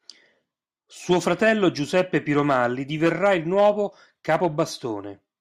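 At 4.40 s there is a tiny skip where roughly a dozen milliseconds of speech simply vanish and the waveform jumps. This is an overlap between stream segments: two 4.0-second segments carried overlapping time stamps, and playback trimmed the overlap from audio that was never actually duplicated.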